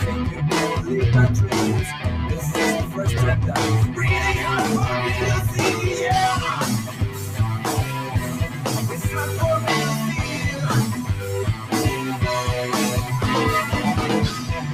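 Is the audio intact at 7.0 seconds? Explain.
No. From 6.84 to 7.39 s there's sound cut by the noise suppressor: it mistook that stretch for noise and pulled it down about 5 dB, so it sags audibly. Behind that, a noise suppressor built for speech is applied to the sound throughout, riding steady parts down by roughly 5 dB, so everything pumps and thins.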